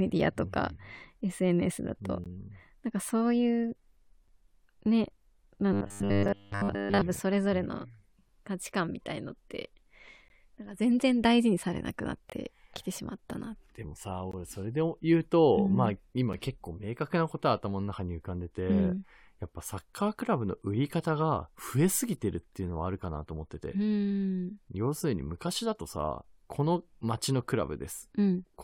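In this speech clip, brief hard-edged silent holes cut in at 2.24, 4.28, 6.28, 8.28, 10.28, 12.30 to 12.32, 14.32 and 16.33 s, about every 2 s. These are gaps between stream segments, where timestamps leave small spaces that the player fills with silence. From 5.73 to 7.02 s the sound turns into a rigid metallic buzz at 100 Hz. This robotic sound is likely from repeated short buffers, with a 10 ms slice looped while most of the real audio is skipped.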